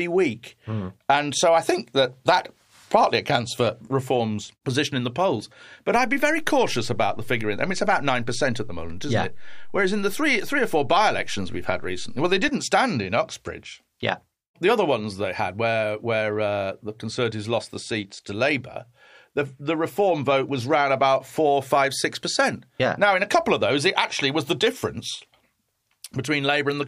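A low thump sounds at 5.96 s, just before "stand in", and a second one comes at 12.49 s. The speech carries on unchanged through both. This is a DC step: the waveform's zero line jumps by about −29 dBFS, holds that offset, then steps back.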